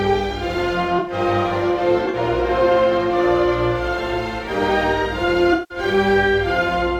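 At 0.98 to 1.13 s, 2.05 to 2.16 s and 5.53 to 5.78 s the music is disrupted by damaged frames, the last and longest about 0.25 s. This is a corrupt frame concealed: the decoder detected damaged AAC frames and muted or papered over them.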